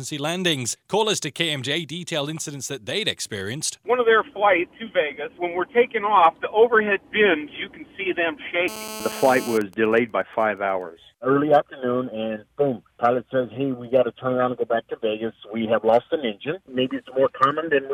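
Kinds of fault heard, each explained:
GSM phone buzz: a nearby 2G phone in a call pulses its transmitter about 217 times a second, and the audio circuit rectifies it into a hard, raspy 217 Hz buzz, about 12 dB below the signal.
GSM signalling bursts: with the phone's user silent during the call, only short radio burst groups are sent and rectified, giving faint even ticks with a longer 217 Hz buzz twice a second, well below the signal.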